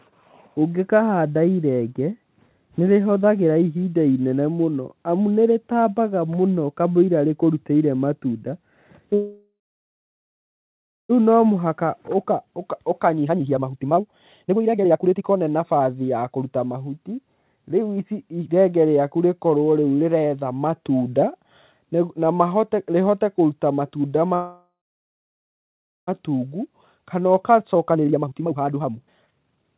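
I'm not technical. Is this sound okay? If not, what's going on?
No. Twice the speech stops dead. At 9.14 to 11.11 s and again at 24.35 to 26.09 s, the last sound hangs on as a fading buzz, then there's silence. This is a call audio freeze, likely from delayed network packets emptying the buffer. Speech then resumes exactly where it stopped, so nothing is lost, only paused.

Right after each freeze, the speech sounds rushed but not higher-pitched. From 11.63 to 18.04 s it runs 1.3 times normal speed, and from 26.39 to 29.72 s about 1.44 times. This is a jitter buffer speed-up: the call trims tiny slices of sound to catch up on the delay.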